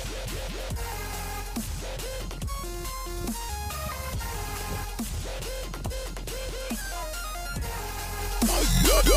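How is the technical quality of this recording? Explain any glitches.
No audible glitches or faults.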